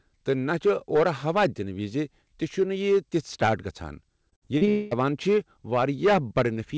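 Hard clipping runs through the whole speech clip: peaks overdriven by about 8 dB are sliced flat, giving crackly fuzz on loud syllables. The waveform shows squared-off tops, and the spectrogram shows vertical harmonic smears reaching the 8 kHz ceiling of the wideband call codec.

From 4.30 to 4.69 s, repeated packet loss makes the speech choppy and robotic. Short holes are patched by looping the preceding sound, covering about a third of the span. On the waveform this appears as chopped, repeating cycles, and on the spectrogram as smeared, blocky patches.

From 4.69 to 4.93 s, the audio gives way to a fading, buzzy continuation of the last sound with no true silence. This is most likely a long network dropout, and the spectrogram shows steady horizontal stripes dimming out.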